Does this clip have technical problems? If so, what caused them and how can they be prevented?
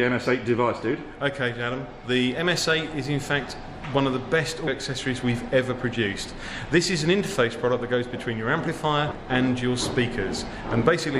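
Yes. At 4.66 s and again at 9.11 s the audio jumps forward by about a fifth of a second, heard as a brief smeared blip rather than a hard click. These are compressed frames skipped: whole blocks of the encoded stream were missing or rejected by the decoder as damaged, so playback resumed further on. The jump size fits roughly seven frames of about 26.1 ms each, and the overlap between neighbouring frames softens the join. Preventing it means verifying file integrity after transfer or storage and using error-protected or retransmitting delivery so no frames are lost or corrupted.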